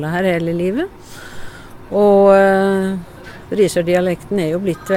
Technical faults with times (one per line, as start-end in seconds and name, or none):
none